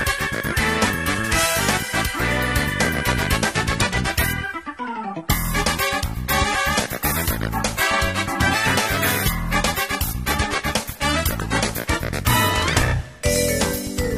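At 3.68 s the adaptive stream drops to a lower bitrate without any gap. Codec artefacts thicken, a change that fits a step from about 96 kbit/s AAC down to about 32 kbit/s. Full quality returns at 11.68 s.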